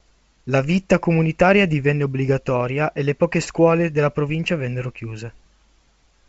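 No technical faults can be heard in this speech, which comes through G.722 wideband telephone coding at what sounds like 64 kbit/s, with the audio band ending near 7.7 kHz as that coding allows.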